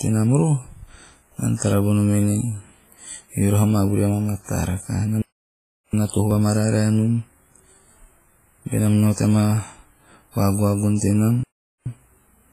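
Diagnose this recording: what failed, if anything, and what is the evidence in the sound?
Codec: heavy washy ringing and a hiss that breathes with the speech run throughout, likely from WMA compression near 24 kbps. The spectrogram shows smeared frames and missing weak lines.

Driver or buffer: the speech skips ahead at 3.09 s and 6.31 s, losing a few milliseconds and about 10 ms, likely a dropped buffer (overrun). The waveform shows abrupt splices.

Playback: the sound stops mid-flow from 5.22 to 5.93 s and from 11.43 to 11.86 s, likely a playback stall. Both spectrogram and waveform show blank gaps.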